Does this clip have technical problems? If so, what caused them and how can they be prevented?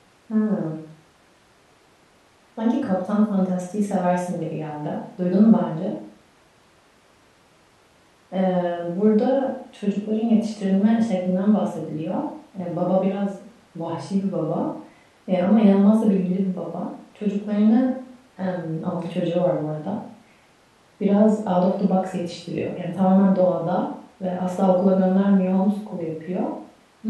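No, the speech signal carries no technical faults, so there is nothing here to trace back to a cause or to guard against.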